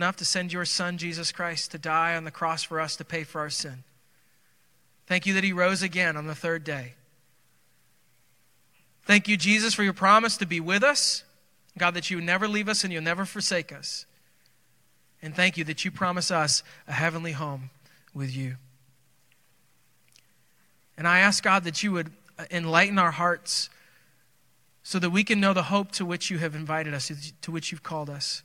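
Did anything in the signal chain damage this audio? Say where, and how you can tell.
No, no damage is audible.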